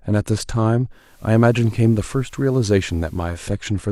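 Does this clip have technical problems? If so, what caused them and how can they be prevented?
Yes. From 0.90 s to 3.54 s there's digital radio blending to analogue. The receiver lost its digital signal, cross-faded over 338 ms to the station's FM broadcast, and later faded back. Level stays the same, but FM hiss comes up, sitting roughly 35 dB below the speech. To prevent it, improve reception with better antenna placement, or capture the station's digital stream directly so the receiver never needs to fall back.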